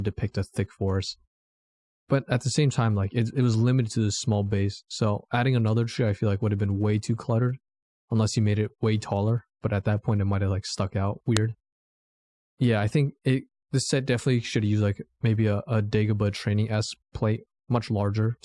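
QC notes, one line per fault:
11.37 s: file header played as audio. A single sharp, loud click cuts through the speech, where a new segment was appended with its WAV header intact. Those few dozen header bytes get decoded as sample values, producing an abrupt snap unrelated to the surrounding signal.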